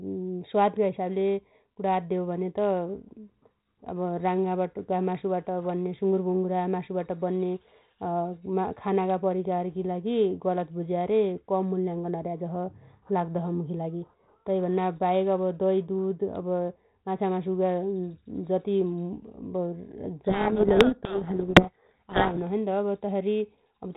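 Telephone-band speech, carried over 32 kbit/s G.726 with only light coding damage, is buried in harsh distortion from 20.24 to 22.39 s by a codec payload misread: the decoder takes the G.726 code-word bits in the wrong order. Unlike low-bitrate ADPCM hiss, it starts and stops abruptly.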